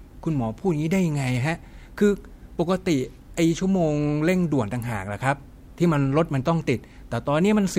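No technical faults can be heard anywhere in the recording; the signal stays steady and intact throughout.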